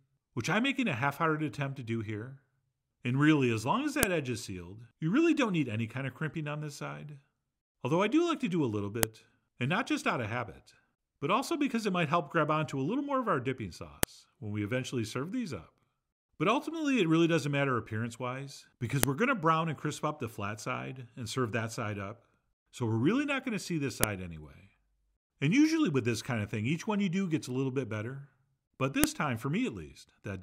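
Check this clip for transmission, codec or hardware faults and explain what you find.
One fault recurs through the clip: a file header played as audio. Sharp clicks land at 4.03, 9.03, 14.03, 19.03, 24.04 and 29.04 s, every 5 s. Each marks a joined piece whose header bytes were decoded as samples. The result is a loud snap, whatever the sound is doing.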